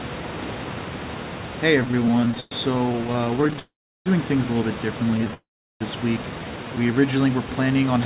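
Speech, carried over a call path whose band stops at 4 kHz, consistent with G.711 mu-law at 64 kbps, with room noise sitting about 13 dB below the voice. Repeated stalls (stutter) run from 1.8 to 3.59 s: the jitter buffer kept running dry, 46 times in that stretch, and the receiver stretched the last sound across each gap, the longest 112 ms. Roughly a third of the span is concealed, so the speech drags and catches. A shorter burst of the same stutter, six gaps of up to 17 ms, occurs between 5.11 and 5.34 s. Call audio freezes follow each stutter, from 3.59 to 4.08 s and from 5.34 to 5.82 s. Each is about 0.47 s long: a brief held sound fades into roughly 0.35 to 0.37 s of silence before speech resumes where it stopped, with nothing lost. The likely cause is packets held up in transit while the buffer sat empty. A jitter buffer slow-down from 6.39 to 7.19 s repeats pitch periods to rebuild its reserve, adding about 123 ms. 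The speech plays at 86% speed at unchanged pitch, sounding drawn out.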